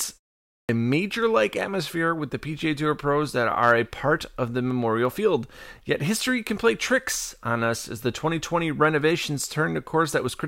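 Speech, and right at the top there's a clipped start after a pause: after about half a second of silence, the output seems to wake up late, so roughly 90 ms of sound from 0.6 to 0.69 s is lost and the first word pops in abruptly.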